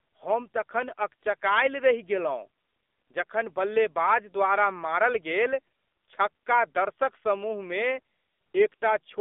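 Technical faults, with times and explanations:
Throughout, AMR narrowband mobile codec: the speech sits within about 250 Hz to 3.6 kHz and has a plainly audible buzzy, synthetic edge from pulse-driven vocal-tract modelling in 20 ms frames, which fits a 7.4 kbps mode. A plain band-limit would sound thin but natural instead.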